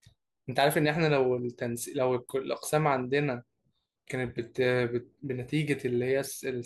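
No technical faults can be heard anywhere in this speech recording.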